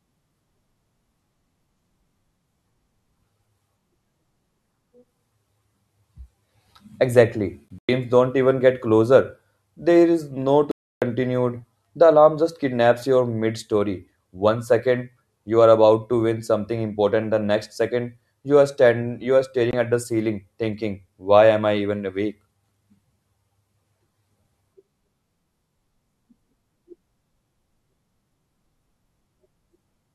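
Bluetooth dropouts break the speech three times, most likely packets failing to reach the headphones in time. From 7.79 to 7.89 s, about 120 ms of audio vanishes in short silent gaps spread over roughly 200 ms, the longest about 100 ms, just before "don't even get closer". After "is no", a solid 0.3 s hole runs from 10.71 to 11.02 s. At 19.71 s, between "are stand you are" and "at the ceiling thinking", a 20 ms gap fits a single lost packet. Each gap cuts off abruptly or with a fade of a few milliseconds, and the speech resumes further along, as though it had kept playing.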